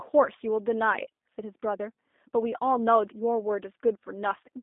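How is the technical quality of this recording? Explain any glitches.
The quality is limited by a low-bitrate phone codec. It affects the whole clip. The speech sounds like G.729 codec coding. The sound stops at 3.7 kHz and starts near 250 Hz. The codec rebuilds the speech from a vocal tract model, a pitch predictor and a few pulses per frame. That approach fits an 8 kbit/s VoIP link. The damage is plainly audible. The speech sounds rough and somewhat synthetic.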